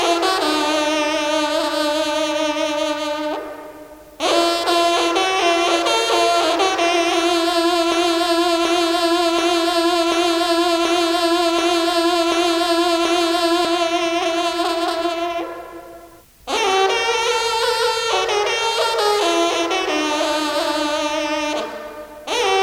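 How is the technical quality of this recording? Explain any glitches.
The recording has one clear glitch. From 7.92 to 13.65 s, a broken-record loop replays one identical 0.73 s fragment eight times, likely from a stalled stream. Unlike a brief stutter, it keeps going, and the audio meant for that stretch is lost.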